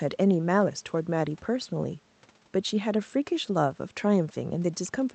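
Nothing goes wrong anywhere in this speech clip, and the only thing worth noting is the call path itself, whose top end rolls off at 8 kHz the way a wideband call codec's would.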